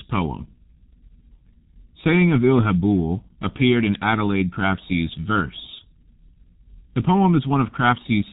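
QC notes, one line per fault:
throughout, G.723.1 codec: heavy low-rate coding cuts everything above 3.8 kHz, so the speech sounds muffled. The codec's voice model updates slowly across long frames, which blurs consonants and adds a hoarse edge. The damage fits a bitrate near 6 kbit/s.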